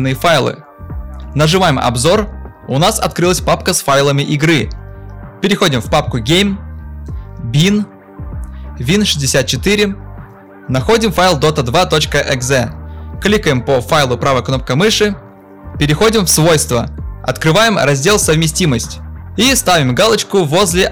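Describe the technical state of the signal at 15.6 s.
Hard clipping at 15.6 s, as across the whole clip: about 12 dB of overdrive flattens roughly 7 percent of samples, adding harsh, fuzzy upper harmonics on loud sounds.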